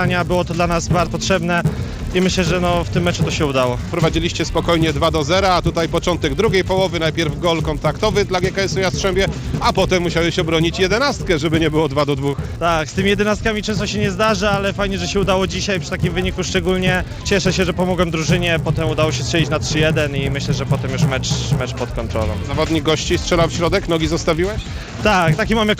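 From start to end, the resampler restarted on every block: each 10 ms block was converted separately, probably from 16 kHz up to 48 kHz, leaving a small error at every edge. This yields a 100 Hz buzz that, unlike mains hum, vanishes whenever the sound stops.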